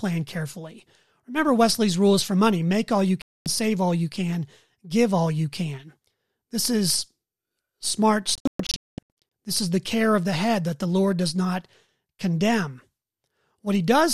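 A digital broadcast dropout occurs twice. The receiver lost good frames and muted until valid data returned. At 3.22 s, after "money make all you", the speech cuts to silence for 240 ms and resumes at "save all you can". From 8.35 to 9.22 s a longer disruption breaks the speech into several short holes, about 624 ms of sound lost in total, the longest gap 216 ms. Whatever was broadcast during those gaps is gone.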